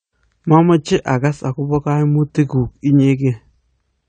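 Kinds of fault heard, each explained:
AAC compression: The speech has nothing above about 9 kHz and carries plainly audible coding damage, with a dull, smeared quality throughout, which points to a low bitrate around 32 kbps. The likely cause is AAC-LC coding, which divides the sound into short frames of frequency lines and quantises them coarsely, discarding the top of the spectrum. A simple low-pass filter would remove the top just as cleanly but leave what remains intact, without this coding damage.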